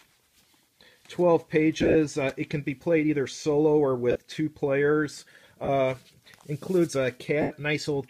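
Lost LE Audio frames occur at 1.80–1.95 s, 4.11–4.19 s, 5.64–5.69 s and 7.41–7.51 s. At each, the LC3 decoder fills missing frames by replaying the previous spectrum with random signs, so tones smear into noisy hash. The first two are scattered losses: 82.5 ms within 150 ms, and 52.5 ms within 75 ms, with runs of roughly 30 and 40 ms. The last two lose 37.5 ms and 90 ms. The sizes fit 7.5 ms frames.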